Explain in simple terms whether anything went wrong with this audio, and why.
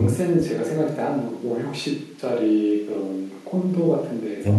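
Nothing went wrong technically here: the speech comes through as a steady, continuous signal with no dropouts, glitches or distortion from the equipment or the transmission.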